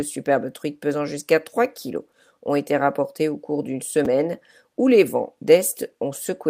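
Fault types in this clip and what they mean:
Chunks out of order: a short slice of the speech plays one slot late, after the slice that should follow it. Nothing goes missing, but the sequence is swapped. Each slice lasts about 5.8 ms, which fits a small audio buffer. It happens at 4.05 s, just after "rapportées au cours d'une", and again at 6.16 s. Each time there is a brief jumbled flicker.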